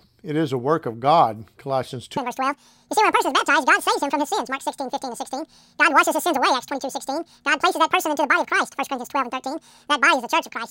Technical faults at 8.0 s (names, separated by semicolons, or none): audio read two samples at a time (double speed)